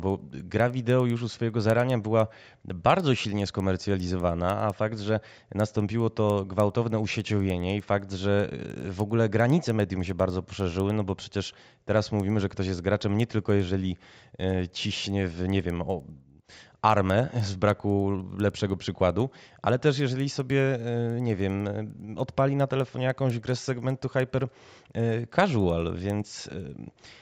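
Right through the speech there's a steady tick at 10 Hz, the resampler restarted on every block: each 100 ms block went from 16 kHz to 48 kHz alone, leaving edge errors.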